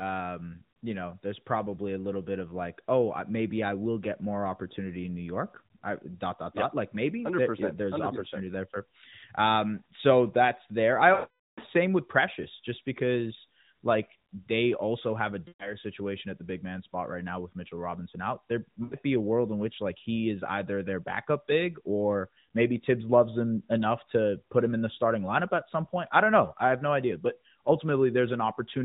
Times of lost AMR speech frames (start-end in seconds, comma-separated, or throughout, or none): 11.14-11.60, 15.48-15.74, 18.84-18.95